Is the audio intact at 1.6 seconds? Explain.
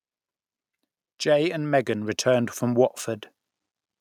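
No. At 1.6 s the clip is inside an automatic gain rise running from 1.23 to 3.03 s. The gain control judged the input too quiet and raised its gain by about 7 dB, so speech and background noise swell together gradually.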